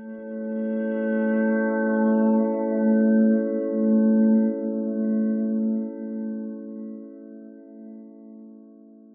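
No faults detected anywhere in the audio.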